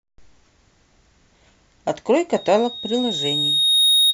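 From 2.36 s to the end of the speech, a loudspeaker feedback squeal takes over. The microphone is picking up the loudspeaker it drives, and at 3.7 kHz the loop gain has passed unity, so that single frequency keeps reinforcing itself. It swells over roughly a second and a half into a steady, piercing tone that ends up a few dB louder than the speech and is still sounding when the audio stops.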